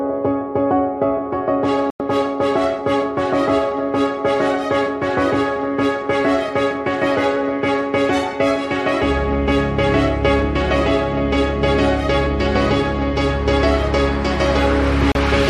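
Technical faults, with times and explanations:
1.90 to 2.00 s and 15.12 to 15.16 s, digital broadcast dropout: the sound abruptly mutes, for about 0.1 s and then 36 ms, before returning. Corrupted or missing frames made the receiver go silent until valid data resumed, which fits three and then one lost frame of roughly 32 ms each.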